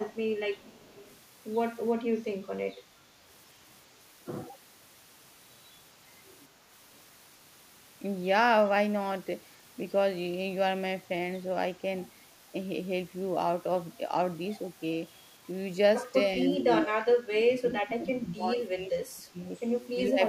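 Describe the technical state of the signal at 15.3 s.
At 15.3 s the speech signal is intact, with no audible technical fault.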